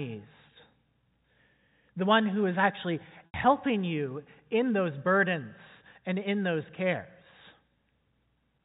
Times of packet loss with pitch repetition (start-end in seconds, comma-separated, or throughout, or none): 3.26-3.34